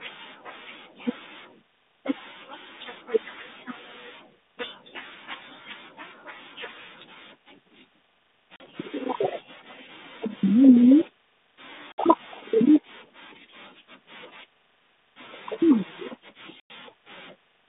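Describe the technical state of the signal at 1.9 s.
At 1.9 s the audio is intact, with nothing beyond the light coding hiss and the roughly 150 Hz to 3.7 kHz telephone band of the 32 kbit/s G.726 ADPCM path it travels through.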